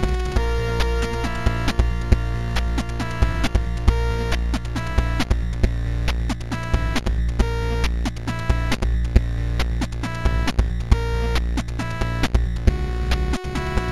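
Throughout the clip there is imaging from linear upsampling. The audio was raised from 16 kHz to 44.1 kHz by joining samples with straight lines, a crude interpolation that filters poorly. The top of the original band sounds dulled, and a faint mirrored copy of the spectrum sits between 8 and 16 kHz, roughly 35 dB below the signal, adding a light metallic shimmer to bright sounds. On a spectrogram this appears as a dim reflected band above 8 kHz.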